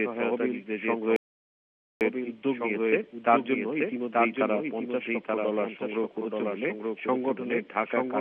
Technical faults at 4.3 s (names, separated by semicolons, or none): doubled audio track